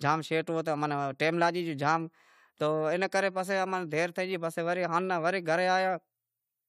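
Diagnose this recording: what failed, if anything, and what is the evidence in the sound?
No fault found anywhere.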